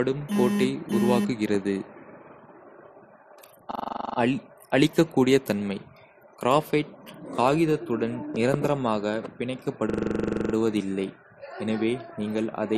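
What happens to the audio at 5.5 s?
Transcoding between lossy codecs affects the speech at 5.5 s and throughout the clip. It is likely that a low-rate MP3 encode, around 40 kbit/s, was then re-encoded as AAC-LC at about 64 kbit/s. The second encoder spends bits preserving the first one's artefacts, then adds its own coarse quantisation. The two textures layer together, and the lowest band limit in the chain survives, leaving nothing above 14 kHz.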